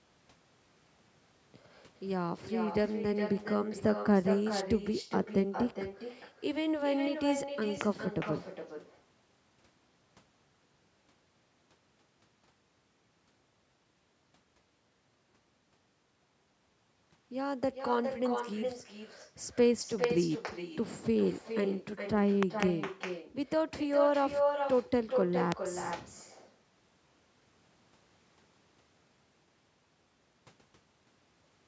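Throughout this speech recording, every phrase is trailed by a quieter, thinner copy of itself arriving roughly 0.4 s later, at about 7 dB below the direct sound. This is echo with no canceller: the far end is playing the call through a loudspeaker, its microphone picks that playback up, and nothing subtracts it before it is sent back, so the talker hears their own voice after the network round trip. On top of this are loud pops, sharp clicks standing well above the speech while it carries on underneath. Single pops sit at 7.81–7.83 s (around 15 dB above the signal), 20.04–20.06 s and 25.52–25.54 s (each around 20 dB above). At 22.43–22.65 s two pops arrive in quick succession, also around 20 dB up. These point to a likely electrical transient, such as a plug, switch, static discharge or driver glitch, injecting a voltage spike into the chain. The audio band stops at 8 kHz, consistent with normal call microphone processing.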